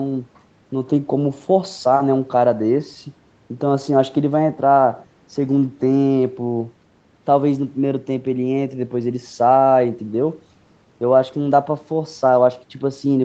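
No technical faults can be heard in this speech. The sound stops at about 8 kHz, the band limit of the call path it travelled through.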